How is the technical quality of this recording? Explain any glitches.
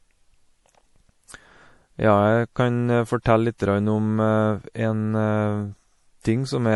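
Technical quality is limited by one audible fault running through the whole recording. MP3 compression is the likely cause: dull, band-limited treble and watery, swirling sibilants, as weak spectral lines flicker between frames, which fits a low bitrate around 48 kbps.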